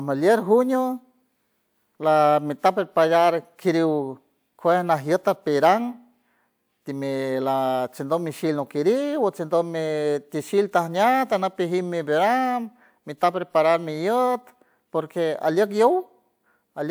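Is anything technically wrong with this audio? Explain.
No, nothing is technically wrong.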